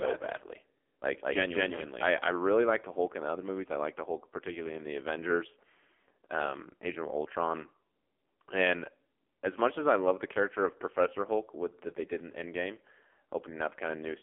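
From the start of the clip to its end, the speech has the narrow, buzzy character of the AMR narrowband mobile codec. Content sits between about 250 Hz and 3.4 kHz, and heavy coding damage makes the voice synthetic, which fits a low AMR-NB mode near 5.9 kbps.

A doubled audio track is already under way at 0 s and runs to 2.08 s. A second full-band copy, about as loud as the first, trails by roughly a fifth of a second with no room decay, likely from an out-of-step second capture or edit, then stops abruptly.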